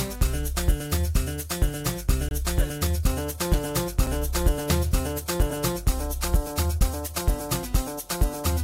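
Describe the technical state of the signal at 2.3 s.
At 2.29 s the signal drops into a block of digital silence lasting about 23 ms, until 2.31 s. This happens when the output buffer is not filled in time. The length fits a 1024-sample buffer. The sound stops dead and returns with no fade. At this length it comes across as a short hole.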